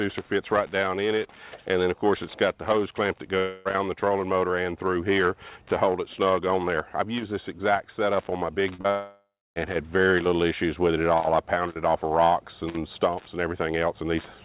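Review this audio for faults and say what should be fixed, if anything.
Around 3.38 to 3.68 s, and again from 8.90 to 9.59 s, the audio stops being real and turns into a fading continuation of the last sound. The first stretch is about 0.27 s and is filled the whole way. The second loses about 0.66 s: the smeared fill dies away and leaves roughly 0.29 s of silence before the sound picks up further along. That's most likely a long network dropout, with the lost part simply gone. To prevent it, the sender needs a steadier network route, or redundancy or retransmission, so that gaps this long don't happen.

Just before that second gap there are two quick blips at 8.75 s and 8.81 s, each a hole of about 30 ms. They're short concealed packet loss: the decoder didn't get those packets in time, so it stretched the preceding sound over the hole and blended back in. What you hear is a brief smear or wobble, back-to-back, right before the bigger dropout hits. 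Forward error correction or a slightly deeper jitter buffer would cover losses this short.

The whole clip also stops at about 4 kHz, which fits the G.711 mu-law call path at 64 kbps it went through.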